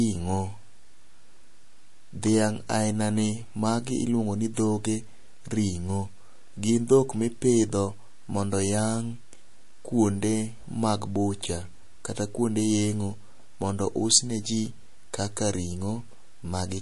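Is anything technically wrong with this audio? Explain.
Yes, there's audible damage all the way through this speech clip, and it sounds like MP3 compression is the likely cause. Nothing survives above about 11.3 kHz, so the top end sounds dull and boxed in. When bits run short, the encoder drops the treble at a fixed point and keeps switching weak frequency lines on and off from frame to frame. That gives the sound a watery, swirly texture. The amount of damage fits a low bitrate of around 48 kbps.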